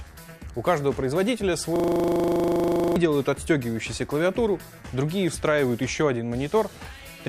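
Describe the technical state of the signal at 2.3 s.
A system hang loop runs from 1.76 to 2.96 s. The stalled system replays one 40 ms buffer, giving a 25 Hz buzz. The waveform repeats identically, and the spectrogram shows tiled vertical stripes.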